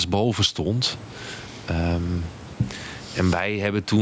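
Gain pumping throughout: the gain ducks around 15 dB under louder speech, likely excessive input gain driving a fast limiter.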